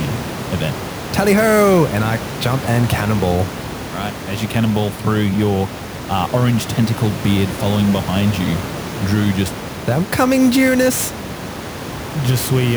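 Throughout, the converter's clock wanders by roughly 10 microseconds; this sample clock jitter adds hiss about 20 dB down, swelling on loud, bright passages.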